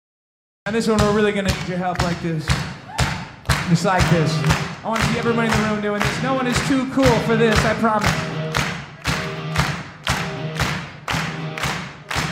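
Capture began late, a cut-off start: the first 0.66 s is digital silence, then the sound bursts in at 0.66 s already mid-event. With no natural attack or fade-in, the opening of that sound is simply missing, so the entry feels abrupt.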